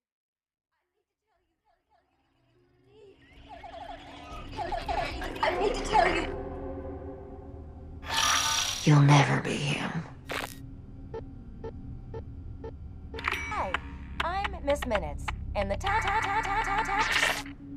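The audio fades in smoothly from the start to about 5.7 s. At 13.51 s, compressed frames are skipped. Several whole frames, around a tenth of a second of audio, never play, so the sound jumps ahead. The join fits frames of about 26.1 ms each.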